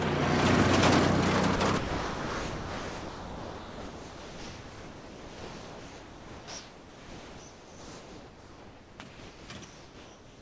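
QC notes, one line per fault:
1.56–1.60 s and 1.78–9.00 s, sound dropped by the voice detector: a short 40 ms gap, then a long stretch of about 7.2 s where the sound gives way to steady, featureless noise. Around 4.6 s of real sound goes missing inside that stretch. The likely cause is the sender's voice detector treating the sound as background and stopping transmission. The receiver then filled the gap with comfort noise until the detector triggered again.
9.09–9.49 s and 9.65–10.41 s, comfort noise in place of the background: in these pauses the background loses its texture and turns into a flat, even hiss. It is about 3 dB quieter in the first pause and about 2 dB quieter in the second. The background here sits roughly 20 to 23 dB below the loud parts. This is likely discontinuous transmission: the sender goes quiet between sounds, and the receiver synthesises noise roughly shaped like the real background.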